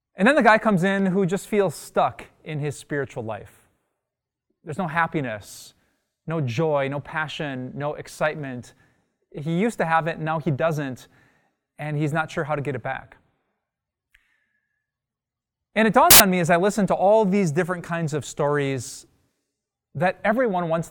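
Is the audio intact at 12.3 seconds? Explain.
Yes, the speech at 12.3 seconds plays through cleanly with no audible technical fault at that moment.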